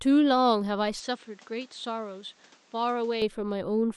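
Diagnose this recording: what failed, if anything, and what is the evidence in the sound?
The input likely switched to a poorer device at the driver. From 1.0 to 3.22 s the speech turns dull, with nothing above 8.6 kHz, and drops about 5 dB.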